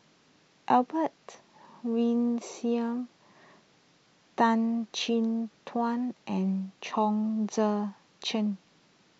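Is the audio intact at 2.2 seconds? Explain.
Yes, the speech at 2.2 seconds is intact, with no dropout, click, distortion or other fault at that point.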